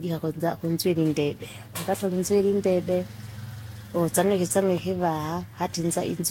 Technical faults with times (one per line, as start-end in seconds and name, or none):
0.00-6.30 generation loss